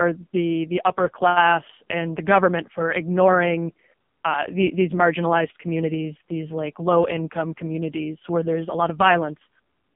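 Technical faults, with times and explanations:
Throughout, AMR narrowband mobile codec: the speech sounds boxed-in, buzzy and synthetic, with nothing above 3.4 kHz and thin lows, as though heard over a telephone line passing roughly 150 Hz to 3.5 kHz. The codec rebuilds the voice from a vocal-tract model driven by a few pulses per 5 ms subframe, so detail is lost. Damage this heavy points to one of AMR-NB's lowest modes, around 5.15 kbps.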